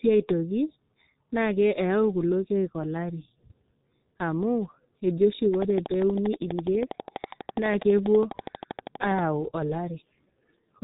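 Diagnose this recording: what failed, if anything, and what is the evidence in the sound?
The speech passed through a G.723.1 codec at 6.3 kbit/s. It works in 30 ms frames with a slowly updated voice model, and it leaves nothing above 3.8 kHz for the whole clip. The result is heavy codec damage: a muffled, hoarse timbre with smeared consonants.

A train of clicks runs from 5.54 to 9.20 s, with about fifty regularly spaced pulses at 12.3 per second, peaking around 10 dB above the speech. The steady, identical ticking suggests a likely source in electrical interference or a struggling interface.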